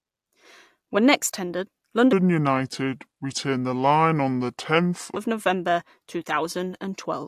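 Speech that, from 2.13 to 5.16 s after "next tendered", slows to 0.726 times speed and drops about 5.6 semitones together, a wrong sample rate fitting 44.1 kHz audio played at 32 kHz, unlike pitch-shifting, which keeps timing.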